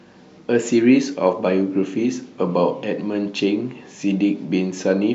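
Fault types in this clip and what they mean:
No faults are audible anywhere in this recording.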